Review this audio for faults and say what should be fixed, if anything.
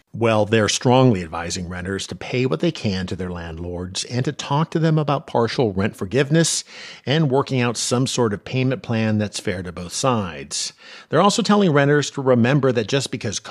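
Nothing needs fixing: the speech signal holds steady throughout, with level, timing and continuity all intact.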